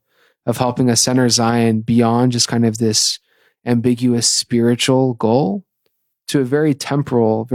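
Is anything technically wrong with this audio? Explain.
No, the signal stays steady and intact throughout this speech recording, and nothing technically wrong can be heard in it.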